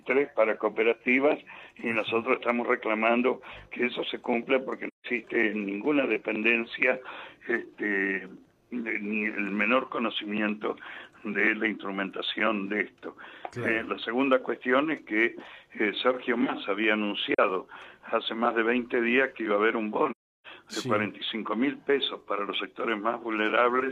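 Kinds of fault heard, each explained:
AAC frame loss with muting: Lost coded frames are decoded as silence, and the overlapping windows fade the sound down and back up. Soft-edged gaps occur at 4.87 to 5.06 s, 17.34 to 17.39 s and 20.11 to 20.47 s, lasting about 171, 43 and 341 ms.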